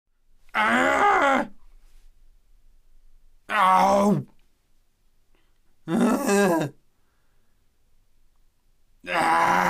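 No technical faults are audible anywhere in this recording.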